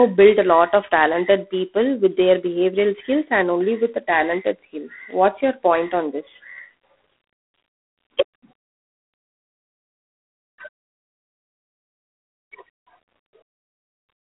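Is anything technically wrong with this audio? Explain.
Yes. Throughout the speech there is G.726 ADPCM damage. Each sample is coded as a coarse difference from a predicted value, and at this depth, which fits 24 kbit/s, the result is a harsh, rasping hiss that rises and falls with the voice. On a spectrogram, the telephone band of 250 Hz to 3.5 kHz shows a grainy noise floor that tracks the speech energy, and there is a hard ceiling with nothing above 3.9 kHz.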